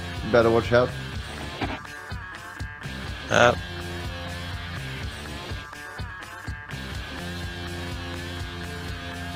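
Listening closely from the first moment to the last, nothing in the audio stood out as a technical problem.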